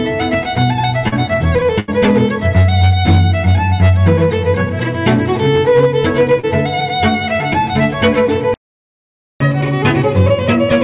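At 1.08 s and again at 6.40 s there is short concealed packet loss. About 40 ms of audio never arrived in time each time. The receiver extended the last sound to cover the hole, then blended back. Each spot is a brief smear or wobble.

At 1.80 s comes a burst of packet loss, about 80 ms long. The receiver held the last sound and let it fade across the gap. You hear a short buzz or hiss. The audio then resumes further on, with that stretch missing.

At 8.54 s the sound stops in mid-flow and stays silent until 9.40 s, about 0.86 s. This is a playback stall. The player most likely ran out of data, or its thread was blocked, until it recovered.

From 9.40 s to the end comes catch-up at higher speed. The backlog plays 1.15 times faster, so pitch rises by roughly two semitones. The sound is quick and sharp throughout. All of it sits within the call path's narrow band, with nothing above 4 kHz.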